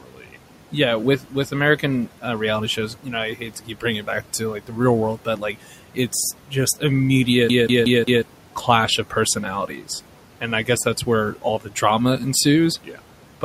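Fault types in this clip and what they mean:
Noise suppressor artifacts: Throughout the clip the suppressor pulls the background down by about 12 dB in the gaps, then lets it rise again under the speech. What remains of the room noise sits about 18 dB below the speech.
Speech cut by the noise suppressor: Here the suppressor mistakes bits of speech for noise and ducks them with the background, by about 11 to 13 dB at worst. Roughly a second of the opening stretch to 6.82 s sounds swallowed, with shorter faint patches around 9.1 to 9.87 s, 10.41 to 11.82 s and 12.84 to 13.43 s.
CD stuck on one turn: From 7.49 to 8.22 s, just before "clash of", a slice of about 184 ms plays four times over with a tiny mute at each jump. It's the quick, even stutter of a disc whose laser keeps getting thrown back one track.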